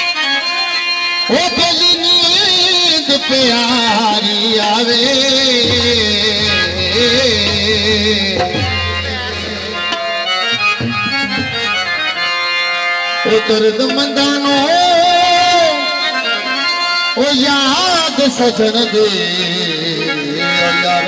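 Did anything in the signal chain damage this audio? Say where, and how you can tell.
No, nothing in the chain damaged it: the signal carries through a normal call path whose band stops at 8 kHz, which fits a wideband codec such as G.722 at around 64 kbps, and no stage shows a fault.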